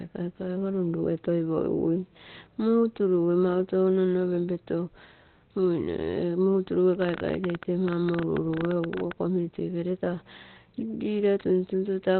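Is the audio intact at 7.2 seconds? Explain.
No. A train of clicks runs from 7.02 to 9.12 s: about 13 similar pulses per second at an uneven pace, roughly thirty in all, peaking about 15 dB above the speech and likely from interference or a faulty connection. Their matching shape sets them apart from random crackle.

Opus compression is also present throughout, likely in its SILK speech mode at a rate consistent with 16 kbps. Nothing sounds above 4.2 kHz, and the speech is muffled and hoarse rather than swirly as with MP3.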